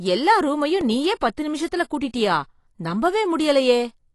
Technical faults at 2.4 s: AAC compression

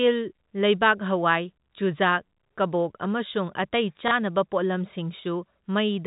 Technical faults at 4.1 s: packet loss with last packet repeated

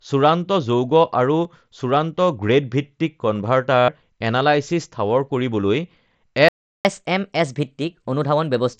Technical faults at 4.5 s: none

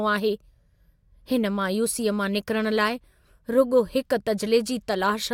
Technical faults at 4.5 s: none

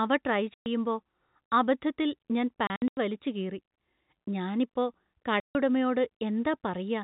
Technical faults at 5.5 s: packet loss filled with silence

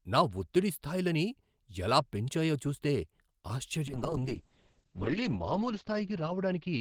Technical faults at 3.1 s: none

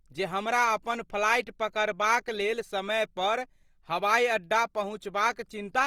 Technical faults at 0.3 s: Opus compression

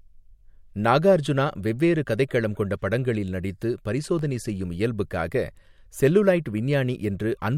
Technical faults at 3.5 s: CD scratch ticks

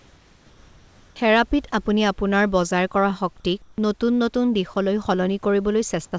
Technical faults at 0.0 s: comfort noise in place of the background

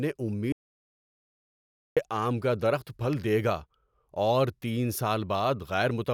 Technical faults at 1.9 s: audio dropout to silence

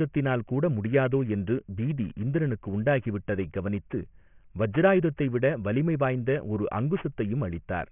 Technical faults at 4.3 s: aliasing

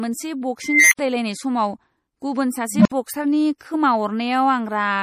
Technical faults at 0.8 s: MP3 compression; unstable filter

